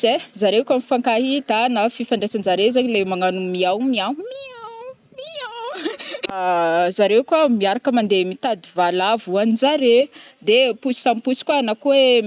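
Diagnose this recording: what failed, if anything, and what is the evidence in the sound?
Nothing failed in this speech recording, and no stage of the chain leaves any evidence of a fault in the sound. There are no events to time and no mechanism to trace.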